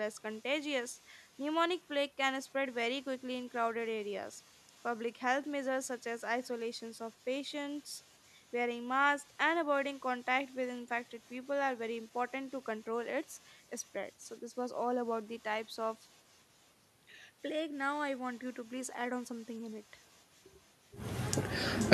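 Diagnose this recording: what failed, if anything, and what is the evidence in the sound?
A faint, thinner copy shadows the speech about half a second later, about 35 dB down: echo with no canceller, far-end loudspeaker sound leaking back into its microphone.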